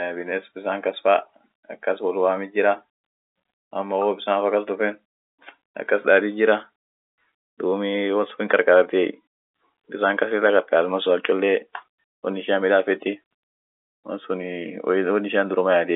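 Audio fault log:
No faults heard anywhere in this speech recording.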